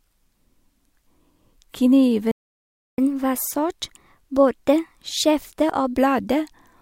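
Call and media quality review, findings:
Playback stall, 2.31 to 2.98 s: speech cuts to silence mid-flow for about 0.67 s, then resumes. Likely cause is the player's buffer running dry or its output thread being blocked, so nothing reaches the device until it recovers.

Catch-up at higher speed, 2.98 to 5.98 s: speech runs 1.1 times fast with pitch raised about a semitone and a half. The player resamples its backlog to recover lost time, then returns to normal rate and pitch.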